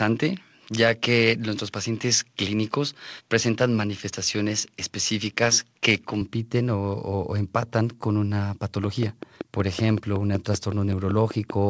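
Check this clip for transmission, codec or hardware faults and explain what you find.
Two faults turn up here, one at each end of the clip.

From 0.0 to 6.21 s, the top end is missing, with nothing above about 6.8 kHz, so the sound is dull and boxy. That points to an input switched to a poorer device, likely a narrower-band mic. The level stays about the same, the hiss sits roughly 50 dB down, and there's no gap at the changeover. After that the band opens up to around 8 kHz, which fits a G.722 call path.

From 8.84 s to the end at 11.70 s, there's a train of clicks at a steady 5.25 per second, peaking about 10 dB above the audio. Clicks this regular and alike likely come from electrical interference or a struggling interface. You hear them as an even ticking that carries on through the pauses.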